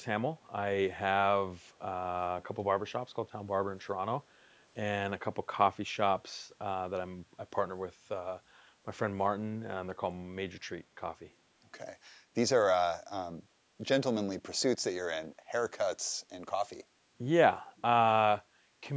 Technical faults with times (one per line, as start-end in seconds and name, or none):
0.40-0.47 echo leak
2.41-2.47 echo leak
10.09-10.15 speech suppressed in double talk